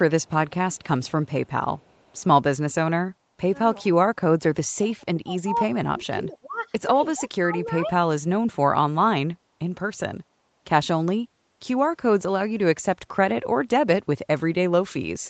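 From 0.22 to 2.24 s, a very faint copy of the speech trails about 372 ms behind: an echo leak, likely from a far-end loudspeaker the canceller did not fully cancel. Between 3.24 and 7.93 s, at 3.24–3.56, 4.37–4.43, 4.77–5.56, 5.88–6.68 and 7.15–7.93 s, the speech drops by around 20 to 30 dB in chunks, likely speech suppressed in double talk as the echo canceller ducked both sides.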